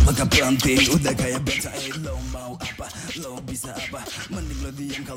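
No technical faults can be heard.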